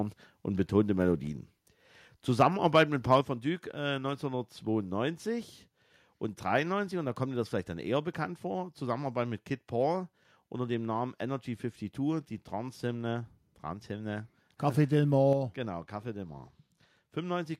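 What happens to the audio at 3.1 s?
From 3.11 to 3.16 s the loudest peaks flatten into a harsh crackle, likely microphone overload: input about 2 dB too hot, clipping a few percent of samples.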